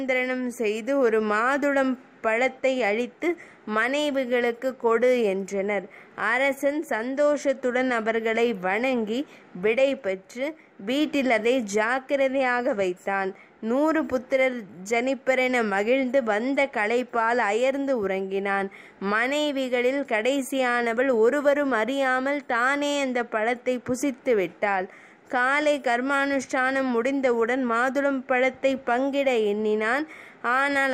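The signal carries no audible technical faults at any point, with level, continuity and timing holding steady throughout.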